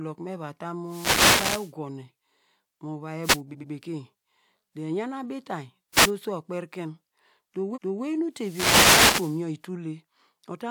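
Wireless microphone noise hit at 0.85 to 1.74 s: the FM radio link fades as reflected signals cancel, and receiver noise rises into a swish of static over the speech. Shorter hits follow at 3.23 to 3.39 s and 5.95 to 6.08 s. Repeated frames at 3.51 to 3.69 s: a 92.9 ms stretch of compressed audio plays twice more, a stutter that adds 185.8 ms. At 7.73 to 8.01 s a 278.6 ms block repeats once more. A final long noise hit runs from 8.35 to 9.45 s.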